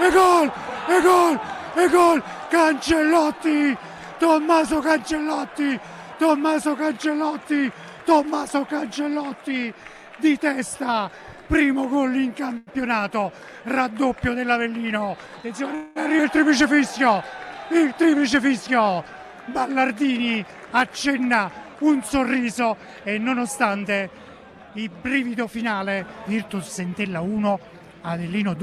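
At 12.57 s there's a short stall from a late packet: the jitter buffer ran dry, so the receiver held the last bit of sound for about 96 ms until the packet turned up, then carried on from the same spot. You hear a slightly stretched moment, nothing lost.

From 15.29 to 15.75 s comes a jitter buffer speed-up, running at 110% and trimming roughly 50 ms by cutting out tiny pitch-period slices. It sounds briefly hurried but keeps the same pitch.

Right after, from 15.75 to 15.98 s, there's a call audio freeze: about 208 ms where the last sound is drawn out as a fading buzz or hiss rather than dropping to silence, and then it picks up where it left off. That's likely packets held up in transit, leaving the buffer empty.

At 16.18 s there's a skip ahead. Roughly 70 ms of audio is dropped, and the two sides are stitched together with only a 12 ms bridge, so it jumps forward abruptly.

Two more jitter buffer speed-ups follow as the buffer keeps draining its backlog. 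From 17.92 to 19.14 s it runs at 105% and removes about 70 ms. From 21.19 to 21.67 s it runs at 107% and removes around 40 ms. Both sound mildly rushed at unchanged pitch.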